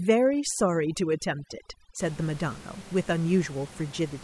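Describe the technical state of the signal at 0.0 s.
Overdone noise removal covers 0.0 to 2.0 s. The reducer cuts single frequency bands far down near its noise estimate, taking quiet speech detail too, so the background drops and breaks up into twinkling specks. A spectrogram shows hollowed dark regions dotted with isolated bright specks.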